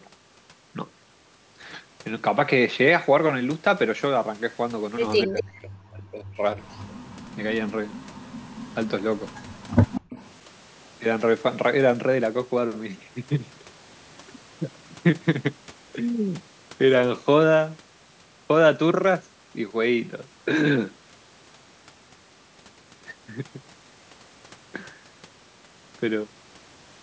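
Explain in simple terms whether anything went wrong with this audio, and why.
Echo leak at 5.22, 6.64, 7.89, 9.26 and 9.87 s: a copy of the speech returns about a quarter second late, likely because the far loudspeaker's echo canceller missed it.

Speech suppressed in double talk between 5.25 and 6.62 s: the voice dips, at worst to near silence, for about a second in total, likely because the canceller confused overlapping talk with echo.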